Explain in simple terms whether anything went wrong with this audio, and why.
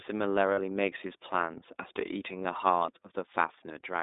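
The speech sounds thin and boxy all the way through, like a phone call, with a faintly rough, synthetic edge that is plainly audible. That comes from the iLBC codec, a low-bandwidth internet-calling format. It keeps only the range from about 250 Hz to 3.7 kHz, so the crisp upper sounds and the deepest lows are gone. It also squeezes each short slice of sound into a simplified model of the voice, which causes that slightly artificial texture.

At about 0.54 to 0.60 s there is a brief moment where the voice briefly smears into a held, slightly buzzy sound instead of moving on naturally. That is lost iLBC frames: about 40 ms of audio never arrived, which fits two missing 20 ms slices. To fill the hole, the decoder repeated the last bit of voice it had, mixed with some noise. Because each iLBC slice is decoded independently, the speech snaps back to normal right after the gap.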